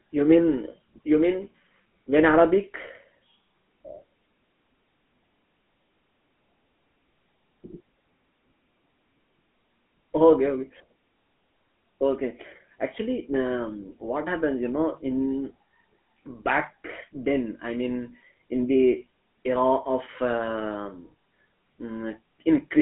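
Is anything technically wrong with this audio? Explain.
Yes. The speech runs through a GSM full-rate codec from start to finish. The codec models the vocal tract and drives it with sparse, regular pulses, which fits a 13 kbps stream. The result is a buzzy, gravelly roughness. Nothing sounds above 3.8 kHz, and the band sits near 150 Hz to 3.4 kHz.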